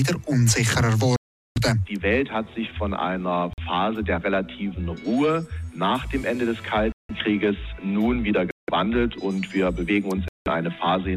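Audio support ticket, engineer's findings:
Five dropouts to digital silence: 1.16–1.58 s (about 400 ms of silence), 3.53–3.60 s (45 ms), 6.92–7.11 s, 8.51–8.70 s, 10.28–10.47 s (each about 170–180 ms). Waveform shows flat-line gaps with abrupt edges; spectrogram shows full-band blank vertical strips. Likely Bluetooth stall: radio interference delayed packets, the headphone buffer emptied, and playback paused until retransmissions arrived, resuming where the audio stopped.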